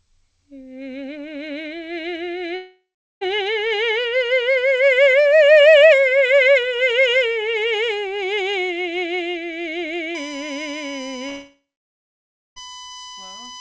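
At 2.56 s the stream most likely lost its packets in a long network dropout, and the receiver stretched the last music into a buzz that fades to about 0.4 s of silence. The music resumes at 3.23 s with roughly 0.66 s missing.

From 10.15 s to the end, USB whine appears. Current drawn in the bus's 1 ms frames leaks into the audio ground or supply, adding a fixed 1 kHz tone and its harmonics. The 3 kHz harmonic is loudest, sitting around 20 dB below the music.

A second dropout runs from 11.29 s to 12.58 s. The concealment again fades into nearly a second of silence, and about 1.28 s of music is gone when playback returns, with the whine continuing throughout. Nothing above 8 kHz comes through, as expected from the G.722 call codec.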